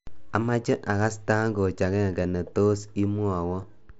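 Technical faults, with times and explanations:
2.23 s and 3.62 s, concealed Bluetooth headset packet loss: each gap of about 7.5 ms, which fits a single dropped packet, is patched with repeated recent waveform, leaving only a faint blip rather than the held buzzy tone of a longer run.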